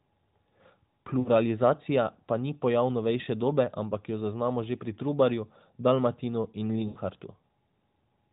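Speech carried over a narrowband mobile link, with nothing above 4 kHz and only light AMR-NB coloration. It has lost AMR speech frames at 1.20–1.28 s, 3.22–3.27 s and 6.88–6.99 s. Corrupted frames were concealed by repeating the last good pitch and vocal-tract settings at falling gain. The single 20 ms gap at 3.2 s is a brief dip or warble, while the 60 ms and 80 ms runs smear into a drawn-out, fading sound. On a spectrogram, harmonics freeze flat and dim. The waveform shows a decaying envelope before speech resumes.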